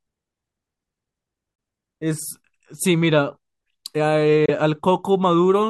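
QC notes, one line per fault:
1.55–1.59 s and 4.46–4.49 s, Bluetooth dropout: the speech cuts to silence for roughly 35 ms each time, and picks up further along as though it had kept playing underneath. The likely cause is a wireless packet arriving too late to be played, so the headphones output nothing until the next good one came in. The lost stretch fits a single packet of about 23 ms.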